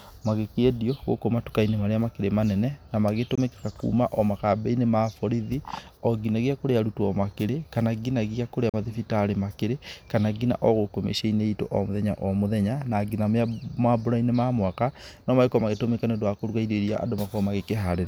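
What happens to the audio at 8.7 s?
Right after "nginagia kũrĩa", the speech cuts to silence from 8.69 to 8.74 s, a hole of about 41 ms, and then returns further along, as though it had kept playing through the gap. This is likely a Bluetooth dropout: audio packets arrived too late and were discarded, and a gap this size fits roughly two lost packets. On a waveform it shows as a flat line with abrupt or briefly faded edges; on a spectrogram, as a narrow vertical blank band spanning all frequencies.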